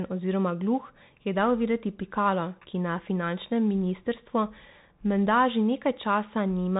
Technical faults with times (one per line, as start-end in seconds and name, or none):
0.00-6.79 Bluetooth CVSD headset codec